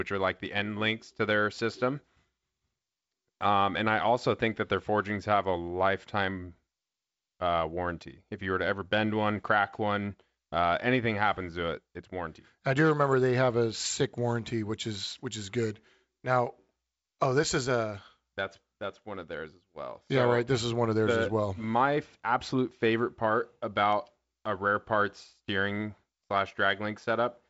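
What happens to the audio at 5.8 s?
At 5.8 s the speech is intact, with no fault at that moment, only the steady wideband telephone character of G.722 coding at 56 kbit/s, with nothing above about 7.7 kHz and the light hiss that coding leaves behind.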